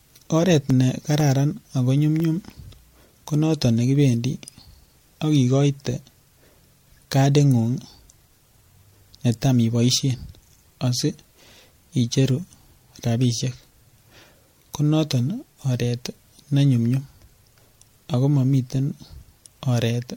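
Speech clip. Generation loss throughout: the sound is swirly, hollow and smeared with nothing above 16.7 kHz, likely from several MP3 re-encodes near 64 kbit/s, each adding fresh quantisation noise. Periodic USB or driver dropouts from 0.2 to 2.2 s: about five short ticks every 0.5 s, each around a millisecond of audio replaced by silence as the bus or driver briefly stalls.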